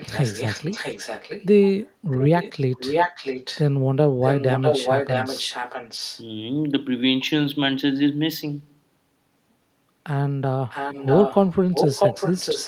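Echo leak at 0.0–1.46, 2.11–2.53, 2.78–3.64, 4.21–6.23, 10.69–11.51 and 11.72–12.67 s: the speech returns 647 ms later, faint at first and stronger from 2.78 s on, likely from incomplete echo cancellation. A spectrogram shows duplicated harmonic patterns shifted right.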